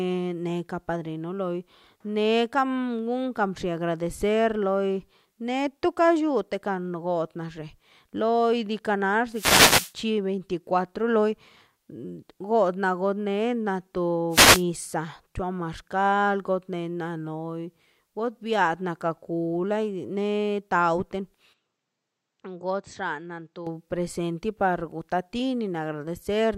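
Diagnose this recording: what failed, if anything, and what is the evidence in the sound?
The failure is in the RF link ahead of the converter: two wireless microphone noise hits, from 9.32 to 9.93 s and from 14.30 to 14.64 s. Each is a short swish of static over the speech, where the FM carrier faded as reflections cancelled and receiver noise rose. On a spectrogram each appears as a broadband vertical smear reaching the top of the band. In the waveform, a ragged noise layer rides over the speech envelope for those few hundred milliseconds.

From 21.53 to 23.67 s, starting just before "presente para", the sound turns duller and quieter with no gap at the change. This is likely an input switched to a poorer device at the driver or device-selection stage. Nothing remains above 8.1 kHz, and the level falls by about 10 dB. A new background noise sits roughly 50 dB below the speech. The spectrogram shows a hard horizontal ceiling at 8.1 kHz, and the waveform envelope shrinks abruptly.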